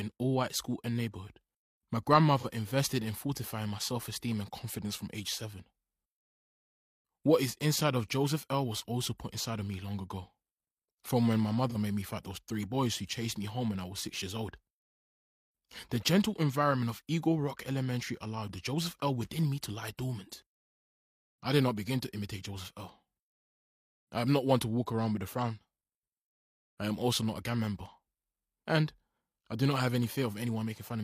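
AAC frame loss with concealment occurs twice: from 2.38 to 2.46 s and from 11.70 to 11.76 s. Each gap fits a single lost frame of about 43 ms. The decoder had no data for that stretch, so it built a stand-in from the last good spectrum, reusing it with scrambled signs or interpolated energy. The audio briefly turns smeared, noisy or phasey at those points before the real signal resumes.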